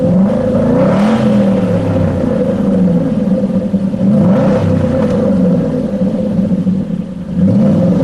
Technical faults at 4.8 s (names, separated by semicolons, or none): none